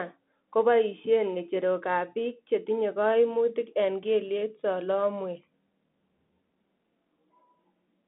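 Throughout, a Bluetooth CVSD headset codec confines the speech to 200 Hz–3.6 kHz, leaving nothing above 3.8 kHz, and its one-bit delta coding leaves plainly audible damage, with a granular hiss under the speech.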